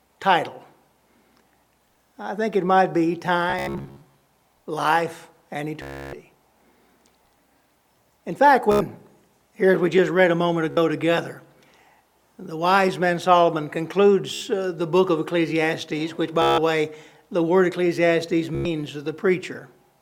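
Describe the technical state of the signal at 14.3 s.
At 14.3 s there is a Bluetooth stutter. It runs from 14.34 to 14.41 s. Data stopped arriving in time, so the receiver kept replaying its last short buffer. That repeated slice gives a brief buzzing, machine-gun stutter. About 73 ms of audio is lost, which fits roughly five dropped packets. When playback resumes, it jumps ahead, as if the sound had carried on underneath the gap.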